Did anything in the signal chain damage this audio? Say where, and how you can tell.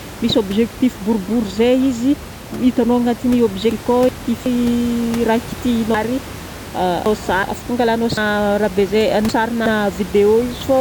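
Yes. Chunks out of order at the buffering stage, where blocks of about 0.37 s were written back in the wrong sequence. At 3.72 to 4.46 s one chunk plays a slot late, and at 5.94 to 7.43 s and 8.17 to 9.66 s a chunk plays three slots late. Nothing is missing, but each span jumbles the speech and is bounded by hard joins. The room noise, about 15 dB below the speech, stays under these glitches.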